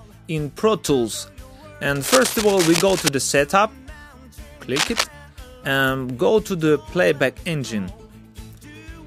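From 1.95 to 3.09 s, then 4.76 to 5.04 s, cable scratch noise rasps over the audio, likely a worn connector being moved. It shows as dense broadband spectrogram speckle and jagged waveform spikes, first slightly quieter than the sound, then about as loud.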